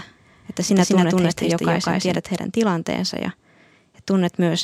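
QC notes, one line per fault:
0.00–2.18 s, doubled audio track: the speech is heard twice, a second full-band copy trailing about 200 ms behind at roughly equal level. It has no decay or room colour. It likely comes from a second, slower capture path. It is present from the start and cuts off abruptly at 2.18 s.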